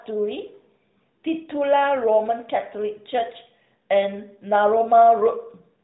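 No technical faults can be heard in this speech.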